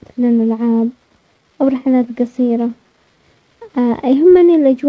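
No faults heard; the speech carries the expected coding character of a wideband call path, consistent with G.722, with nothing above 8 kHz.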